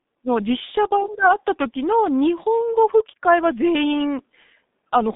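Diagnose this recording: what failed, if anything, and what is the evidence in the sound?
The codec stage failed: G.723.1 coding is heard throughout, with nothing above 3.7 kHz and low end thinning below 200 Hz, so the speech sounds muffled and hoarse and its consonants smear. A spectrogram shows a hard ceiling at 3.7 kHz and blurred formants. The heavy damage fits a rate near 6.3 kbit/s, where the slowly updated voice model in long frames cannot track fast changes.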